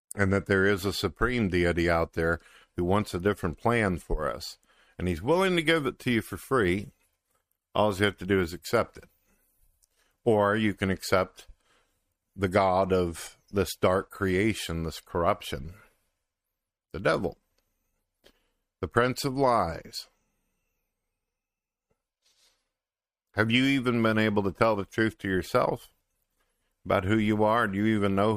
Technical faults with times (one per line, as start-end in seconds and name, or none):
none